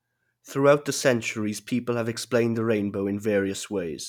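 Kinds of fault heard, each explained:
No technical faults can be heard anywhere in the speech signal.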